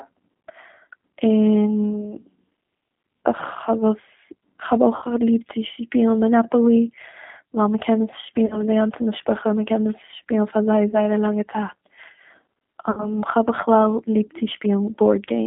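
Speech carried over a G.729 codec line at 8 kbit/s, band-limited to roughly 200 Hz to 3.5 kHz, so everything above that is gone and the vocal-tract-plus-pulse synthesis leaves a plainly audible rough, synthetic edge on the voice. Four drop-outs show VoIP packet loss concealed by the speech codec. The decoder stretches the last pitch and filter into a fading buzzy tone or coloured noise, then recovers slowly. The first is at 4.96–5.05 s, before "ליב צו שפילן מאנאפאלי", with 60 ms lost. The second is at 8.46–8.65 s, between "קען עס" and "די גאנצע משפחה מ'קען", with 40 ms lost. The third is at 10.91–10.96 s, between "עס שפילן פאר זייער" and "א לאנגע", with 20 ms lost. The fourth is at 12.91–13.21 s, with 60 ms lost. The losses fit 20 ms packets.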